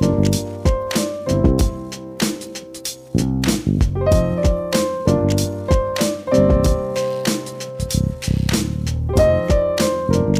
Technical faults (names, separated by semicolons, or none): none